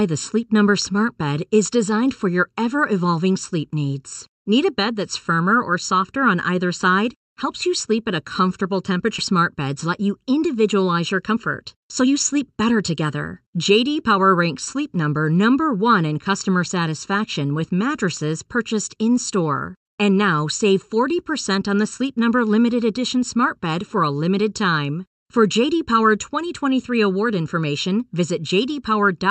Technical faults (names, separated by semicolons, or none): channel delay (comb filtering); skip ahead; jitter buffer speed-up